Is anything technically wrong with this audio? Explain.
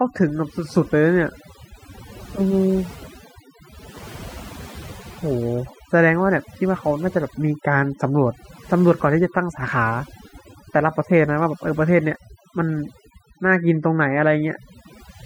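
Yes. Throughout the speech, the background collapses into near silence dotted with twinkling specks. This is overdone noise removal: a noise reducer set too aggressively pushes individual frequency bands close to its noise estimate down or out entirely, taking quieter vocal detail with them.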